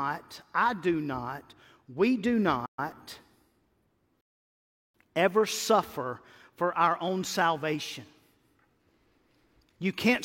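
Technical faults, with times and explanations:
2.65–2.79 s, playback stall: The player likely ran out of data or had its output thread blocked, so nothing reached the output for about 120 ms. The speech goes silent in mid-flow just after "do not we do", then carries on where it stopped.
4.21–4.94 s, rebuffering stall: The player emptied its store of downloaded audio and paused until more arrived. The speech drops to silence for about 0.73 s, then resumes exactly where it left off with "ever suffer for our", losing nothing but adding that time.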